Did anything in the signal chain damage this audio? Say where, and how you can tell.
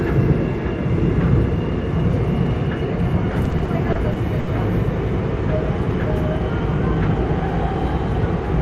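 Yes, at the network stage: repeated stalls (stutter) from 3.31 to 4.50 s. The sound hitches eight times, the longest about 70 ms, adding 200 ms of drag. The jitter buffer kept running dry, so the receiver stretched the last sound rather than losing any.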